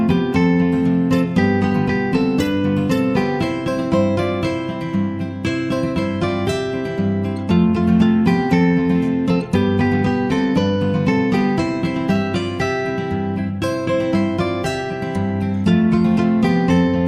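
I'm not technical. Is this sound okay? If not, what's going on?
No, there's one small glitch: a single sharp click at 12.16 seconds. That's most likely dropped samples, where a handful of tiny slices of the recording, a fraction of a millisecond's worth, went missing, so the sound jumps abruptly and snaps.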